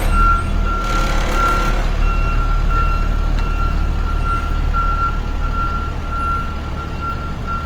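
Throughout, the audio has a rough, grainy texture, with tonal parts turning noisy while the full bandwidth up to about 20.2 kHz stays intact. This is likely Opus compression in its CELT music mode, filling starved bands with noise, which fits roughly 24 kbps.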